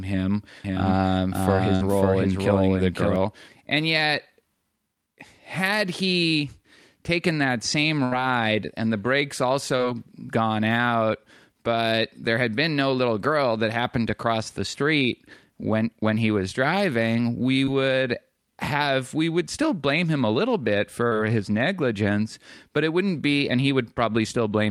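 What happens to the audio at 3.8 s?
Nothing goes wrong at 3.8 s; the speech carries straight through that moment without any dropout, click or other fault.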